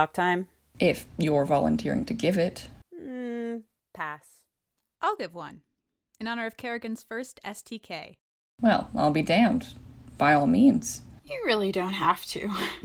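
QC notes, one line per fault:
No faults found in this speech recording. Nothing here calls for a QC entry.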